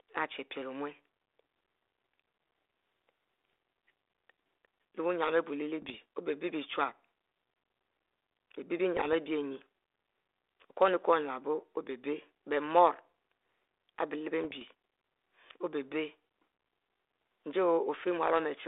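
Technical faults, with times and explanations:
3.52–3.58 s, 5.82–5.96 s, 8.97–9.13 s and 14.44–14.63 s: bit errors on an ADPCM link. Flipped bits derail the decoder's step size and predictor, so each burst pops and rasps briefly. On the waveform, sudden spikes and level jumps appear; the spectrogram shows broadband vertical smears inside the narrow telephone band.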